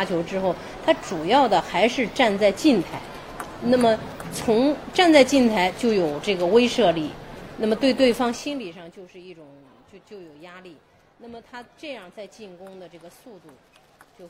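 Zipper noise runs from 8.03 to 8.99 s, where the level drops by about 20 dB in coarse steps at roughly a hundred per second, with no smoothing between them. Each step is a tiny click, and together they form a fast, even ticking that rides on the sound only while the level falls. This level change buzzes, and it stops as soon as the level settles.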